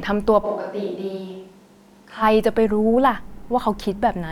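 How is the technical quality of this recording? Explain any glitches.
The recording has one clear glitch: from 0.46 to 2.21 s the speech abruptly turns roomy and hollow, a switch to a distant microphone, most likely because the close microphone's signal dropped out and a farther pickup took over. The speech loses bass, falls about 5 dB, and room noise rises to roughly 35 dB below it. On a waveform the envelope shrinks and smears with reverberant tails; a spectrogram shows thinned low frequencies and a raised noise floor, with hard edges at both transitions.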